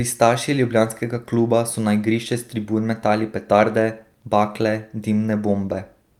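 No technical faults are audible.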